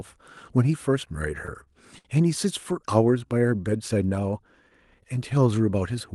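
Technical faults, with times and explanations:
1.45–1.50 s, 1.64–1.69 s and 1.99–2.07 s: short stall from a late packet, three times. Each time a packet arrived late and the jitter buffer ran dry, so the receiver held the last sound for 22, 29 and 61 ms, then resumed where it left off. Nothing is lost, but the sound hangs briefly with a faint buzz or dip.
2.73–3.95 s: jitter buffer slow-down. With its reserve running low, the receiver repeated single pitch periods over and over, adding about 117 ms. Speech plays at roughly 91% speed without changing pitch, so sounds come out drawn out.
5.90–6.14 s: jitter buffer speed-up. Too much audio had built up in the buffer, so the receiver trimmed short pitch-period pieces in quick succession, removing around 40 ms. Speech runs at about 113% speed while keeping its pitch, so the closing moment sounds hurried.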